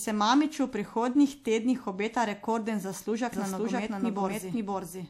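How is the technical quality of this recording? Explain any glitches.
The recording has one fault. From 3.32 s to the end, a doubled audio track appears: a second full-band copy of the speech enters abruptly, about as loud as the original and trailing it by roughly half a second, with no decay or room colour. The likely cause is a second capture through a slower path, or an edit that left two copies out of step.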